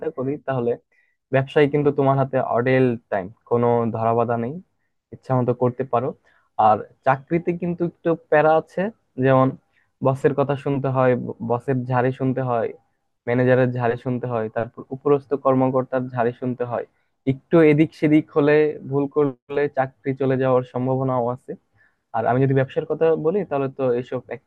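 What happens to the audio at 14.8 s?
Nothing goes wrong at 14.8 s: the speech runs on intact through that moment, with no dropout, glitch or distortion.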